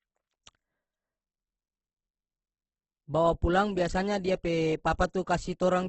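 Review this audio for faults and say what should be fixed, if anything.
Throughout the speech, nothing above 8.2 kHz remains and tones turn grainy and rough, likely Opus compression at a low bitrate near 12 kbps. Encode at a higher Opus bitrate.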